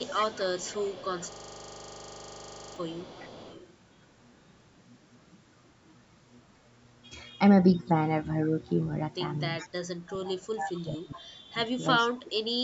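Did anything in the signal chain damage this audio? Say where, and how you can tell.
Yes. Three kinds of damage are audible.

Echo leak, at the call-processing stage: a faint delayed copy of the speech trails it by about 0.41 s. It runs from 0.0 to 3.74 s at about 20 dB below the speech and returns in short scraps at 4.02–4.07, 4.37–4.46, 8.69–8.74 and 9.59–9.69 s, at about 20 to 40 dB down. The likely cause is a far-end loudspeaker whose echo canceller let part of the returned signal through.

System hang loop, at the driver or buffer stage: from 1.32 to 2.76 s a single 40 ms slice repeats about 36 times, producing a buzz at 25 Hz in place of the speech. Around a second and a half of real audio is lost there. The host stalled while the hardware kept replaying the same ring-buffer segment, and a 40 ms period points to a buffer of that length.

Speech suppressed in double talk, also in call processing: the near-end speech dips by up to about 25 dB from 9.97 to 11.57 s and by up to about 30 dB from 12.08 to 12.45 s, losing level in patches. 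The likely cause is the echo canceller mistaking overlapping talk for echo and attenuating the wanted speech along with it. The band limit at 8 kHz is normal call microphone processing.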